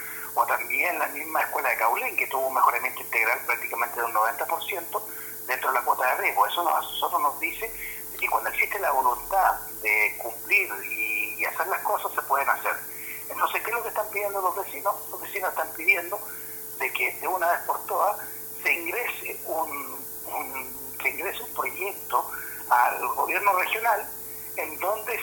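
A steady, thin hiss runs from start to finish, sitting nearly as loud as the sound itself and growing sharply brighter toward the top of the band. This is low bit depth with noise shaping: the audio has been reduced to about 6 bits, and the rounding error from each step is fed back so that the quantisation noise is pushed upward in frequency, leaving the lower range clearer but the highs smothered in hiss.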